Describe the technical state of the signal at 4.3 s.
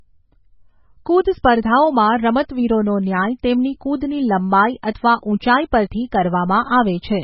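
At 4.3 s the speech carries heavy damage that runs through the whole clip, and the likely cause is MP3 compression at a very low bitrate, which fits a stream of around 16 kbps. The encoder has cut the treble outright, leaving nothing above 5.5 kHz, so the sound is dull and muffled. With so few bits, weak frequency lines drop in and out between frames, giving a watery, swirling texture, metallic chirps on sibilants and smeared consonant onsets.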